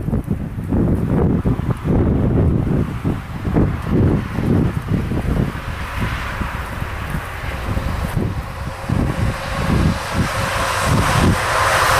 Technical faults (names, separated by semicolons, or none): none